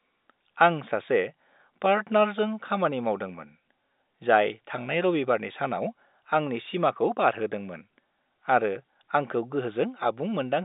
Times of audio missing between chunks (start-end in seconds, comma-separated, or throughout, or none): none